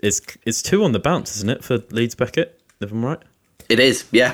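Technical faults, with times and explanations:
No technical faults are audible anywhere in this speech recording.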